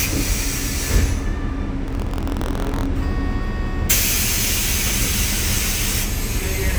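A recording of everyday sounds with buffer tearing from 1.86 to 2.87 s: the writing program and the playback hardware slip so they cross inside each period, splicing a small sliver of audio about 50 ms old into every buffer, which produces a rattling 43.1 Hz buzz that fits a 1024-sample buffer.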